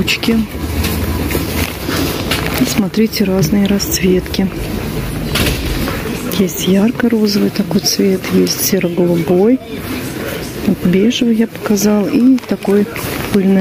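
Right from the start there's gain pumping. The level ducks under each loud sound, swinging around 15 dB. That's likely the gain cranked far too high with a fast limiter clamping down, so everything sounds squashed.

At 12.27 s there's a single sharp click, which points to dropped samples. Likely a tiny fraction of a millisecond went missing from the stream, so the waveform jumps straight to a later value. Nothing audible is lost, just that one tick.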